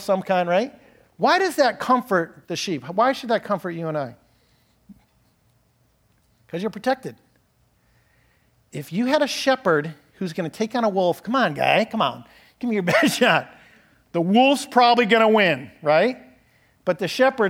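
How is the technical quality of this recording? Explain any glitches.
No glitches turn up anywhere in this speech recording. Nothing in it needs explaining as a technical fault.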